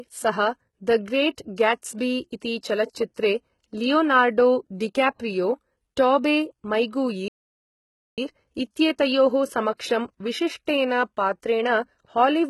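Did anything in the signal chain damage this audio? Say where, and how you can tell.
Yes. At the codec stage, the speech sounds gritty with lispy s sounds, likely HE-AAC compression rebuilding treble at a very low bitrate, around 16 kbps.

At playback, the audio goes silent from 7.28 to 8.18 s, about 0.9 s, then resumes. This is likely a playback stall, where output stopped until the player recovered.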